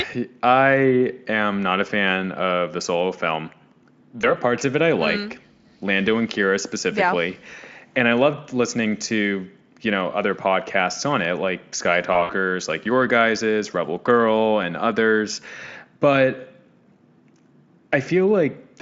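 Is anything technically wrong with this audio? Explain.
Yes. Twice the speech briefly turns into a stretched buzz or coloured noise, then fades before recovering: from 4.21 to 4.34 s, just before "parts of it I", and from 12.13 to 12.32 s, just before "like your guys's". This is VoIP packet loss concealed by the speech codec. About 20 ms of audio went missing in the first dropout and 80 ms in the second, scattered over 160 ms with a longest gap of 60 ms. Each time, the decoder filled the hole by continuing its last pitch and spectral shape at falling gain, which gives the stretched, fading buzz or noise. Because each decoded frame depends on the previous one, the sound stays weak and smeared for a while after the audio resumes. The Speex coding itself shows little or no damage, which fits a fairly high-quality setting.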